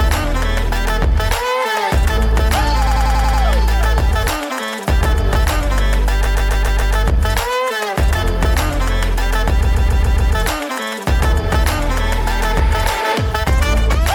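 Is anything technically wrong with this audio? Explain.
Yes. Repeated frames occur at 2.86–3.42 s, 6.25–6.95 s and 9.64–10.34 s. Short runs of compressed audio were decoded more than once, so the same slice plays back to back. The first event loops a 93 ms block six extra times. The other two each loop a 139 ms block five extra times. Each one is heard as a rapid mechanical stutter. The stalls add 0.56 s, 0.70 s and 0.70 s to the running time.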